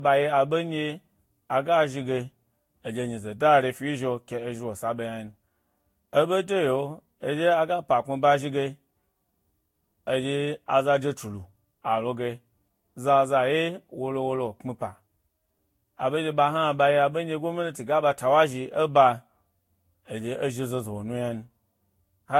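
Generation loss runs through the whole speech clip. It sounds swirly, smeared and hollow, and attacks blur. Nothing remains above 16.6 kHz. The likely cause is about four lossy re-encodes, fitting Vorbis near 60 kbit/s. Each pass adds fresh quantisation errors.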